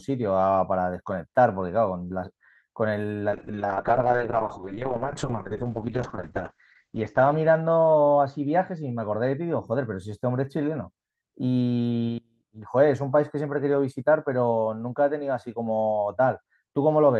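A call bitrate drop runs from 3.32 to 9.73 s: the call's estimated bandwidth fell, so the Opus encoder coded the speech far more coarsely, at its lowest rate for about three seconds, which fits a fall from around 40 to 6 kbps. Its high end narrowed from 12 kHz to 8 kHz, leaving the speech rough and muffled until recovery.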